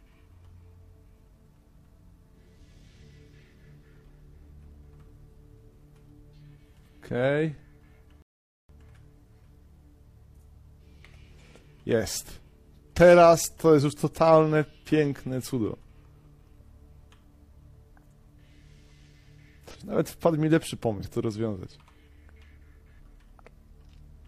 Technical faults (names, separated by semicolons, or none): playback stall; compressed frames skipped